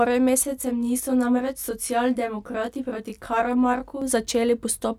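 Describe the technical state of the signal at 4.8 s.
At 4.8 s the speech signal is intact, with no dropout, clipping, distortion or other technical fault audible at that moment.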